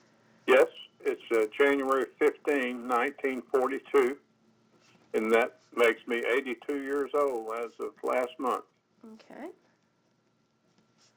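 From start to finish, a steady buzz at 100 Hz rides on the audio. It follows the signal rather than sitting underneath as a constant hum. This is a resampler restarted on every block. The rate conversion, which points to a 16 kHz to 48 kHz step, was run on each 10 ms block in isolation, so the filter lacked the true neighbouring samples at every block edge. The small error left at each boundary repeats 100 times per second and fuses into that buzz.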